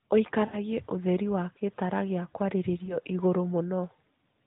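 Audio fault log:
0.46–0.58 s, lost AMR speech frames: the sound briefly smears into a drawn-out, fading tone and then returns weak or rough for a moment. This fits a run of about three 20 ms frames, roughly 60 ms, failing their checksum. The narrowband decoder kept repeating the last good pitch and vocal tract settings at falling gain.
2.86–2.97 s, lost AMR speech frames: a short dip or warble, which fits a single 20 ms frame concealed the same way.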